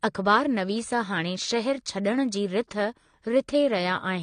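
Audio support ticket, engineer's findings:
Speech dull and smeared throughout, nothing above 9.7 kHz, fizzy warble on sibilants. Likely AAC compression, AAC-LC starved of bits (sounds like roughly 32 kbps), so high bands get dropped.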